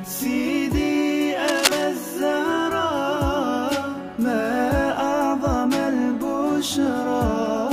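A worn cable, plug or control was likely being moved, making its contact resistance jump about rapidly. That produces cable scratch noise from 1.47 s to 1.85 s: a dense, uneven scratching and rustling laid over the sound for just under four tenths of a second. The bursts sit at roughly the same level as the audio itself, so for that stretch the crackle competes directly with it rather than hiding underneath.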